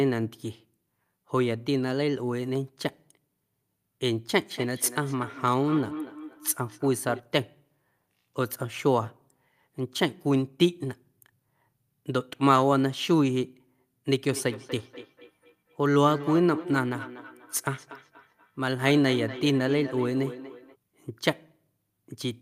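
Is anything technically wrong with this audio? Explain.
Yes, there's feedback echo between two devices, from 4.4 to 7.23 s and again from 14.31 to 20.77 s. Two devices in the same room seem to be on the call. One plays back what the other's mic sent, and that mic picks it up again, which its echo canceller can't remove. You hear each bit of speech come back roughly every fifth of a second, thinner and ringier, peaking at about 14 dB below the speech.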